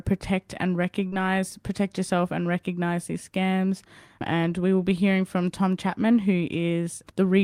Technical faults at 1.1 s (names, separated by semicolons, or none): short concealed packet loss